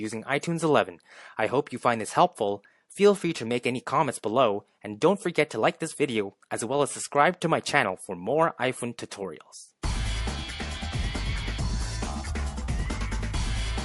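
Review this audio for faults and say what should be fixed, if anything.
MP3 compression damage runs through the whole clip, and it is plainly audible. Quiet detail flickers in and out, giving a watery, swirling texture. Sharp attacks sound smeared. The likely cause is an encoder starved of bits. It dropped weak frequency lines from frame to frame. The amount of damage fits a low bitrate of around 48 kbps. To prevent it, keep a lossless master and encode at a higher bitrate.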